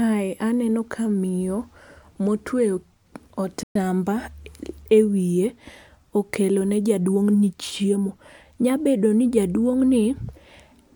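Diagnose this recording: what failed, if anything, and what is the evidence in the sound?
At 3.63 s the speech cuts to dead silence for about 120 ms, then carries on from 3.76 s. This is a playback stall, likely the player's buffer running dry or its output thread being blocked, so nothing reached the output until it recovered.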